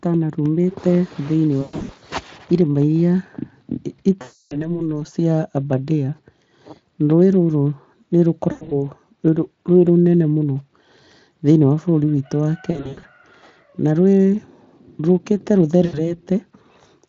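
Speech here suffers VoIP packet loss concealed by the speech codec at 1.61–1.91, 4.21–4.81, 8.51–8.90, 12.71–13.05 and 15.85–16.00 s. The lost stretches are stretched into a buzzy tone or coloured noise that fades rather than silent gaps, and stay weak briefly after recovery.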